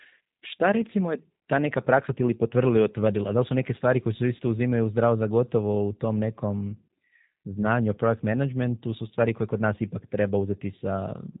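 G.729 codec coding runs through the whole speech recording, with nothing above 3.8 kHz. The speech is rebuilt from a vocal tract filter, a pitch predictor and sparse pulses, which fits an 8 kbit/s stream, leaving it plainly rough and synthetic.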